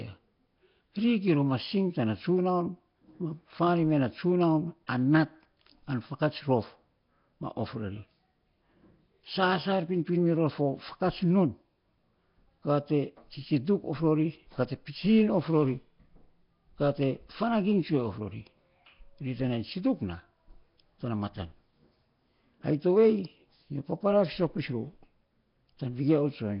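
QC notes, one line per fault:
Throughout, Nellymoser compression: the speech carries a rough, hissy halo and a smeared, underwater quality, with nothing above 5.3 kHz, and the damage is heavy. This likely comes from Nellymoser Asao coding at a low rate, which fits about 22 kbps. Bands too weak to earn bits are replaced by noise, so the hiss tracks the speech rather than sitting steady like a noise floor.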